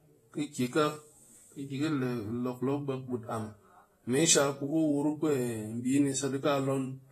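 From start to finish the speech sounds dull and smeared, with a plainly audible warbling fizz on sibilants and nothing above 14 kHz. That points to AAC compression, likely AAC-LC at a low bitrate near 32 kbps, where coarse quantisation thins the spectrum and lowers the cut-off.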